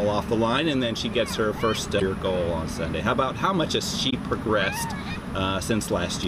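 At 1.98 to 2.02 s and again at 4.09 to 4.13 s, damaged data in the compressed stream corrupts a short run of frames. The decoder cannot read those bytes correctly, so it loses its place in the stream and hunts for the next valid frame header before normal decoding resumes. Each event lasts about 40 ms and breaks the sound with a brief, harsh blip or chirp.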